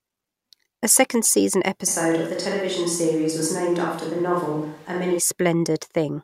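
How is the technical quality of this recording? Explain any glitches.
There's one clear glitch: a stretch where the sound changes character abruptly and then snaps back.

Right after "second season", from 1.89 s to 5.18 s, the speech goes roomy and hollow with the low end thinned out, and a room-noise floor comes up to roughly 30 dB below the speech. The level stays about the same. That sudden switch in and out is the signature of a switch to a distant microphone. Most likely the close mic dropped out and a farther one, picking up more room, covered that span.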